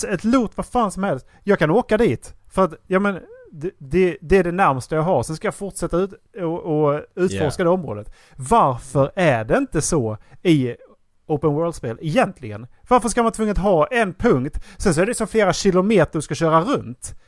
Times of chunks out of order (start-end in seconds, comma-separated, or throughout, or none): none